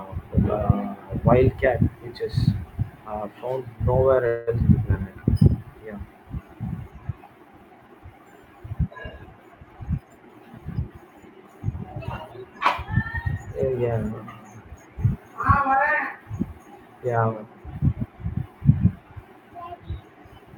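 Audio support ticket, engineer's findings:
Call audio freeze, 4.27–4.49 s: last sound held as fading buzz or hiss for about 0.2 s, then resumes where it stopped, nothing lost. Likely late packets emptying the jitter buffer. Spectrogram shows smeared, decaying frozen band; waveform shows a tapering repeated segment inserted.

Skip ahead, 4.59–4.62 s: roughly a tenth of a second of speech gone, sides joined almost directly by a 10 ms bridge. Dropped audio while later packets waited, pulling delay back down. Waveform shows abrupt discontinuity; spectrogram shows formant tracks jumping without a gap.

Jitter buffer slow-down, 5.03–5.83 s: speech drawn out to 91% speed, pitch unchanged. Receiver repeated pitch periods, adding 84 ms to rebuild reserve. Spectrogram shows stretched syllables with steady harmonic spacing; waveform shows periodic cycles duplicated back to back.

Jitter buffer speed-up, 9.67–11.19 s: speech hurried to 111% speed, pitch unchanged. 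Excess buffered audio trimmed by cutting short pitch-period pieces, roughly 0.2 s removed overall. Spectrogram shows compressed syllables, unchanged harmonic spacing; waveform shows shortened voiced segments with repeated cycle-boundary splices.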